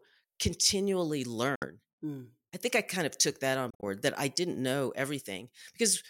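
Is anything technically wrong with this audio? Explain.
Yes. The speech has two Bluetooth dropouts, at 1.55 to 1.66 s and at 3.70 to 3.84 s, between "of took that on" and "that I didn't know". Late packets likely never reached the headphones, so output fell silent: about 61 ms in the first, then about 91 ms scattered over 122 ms. Unlike a noise gate or an edit, the gaps have abrupt edges or a fade of a few milliseconds, and speech resumes further along, as though it had kept playing.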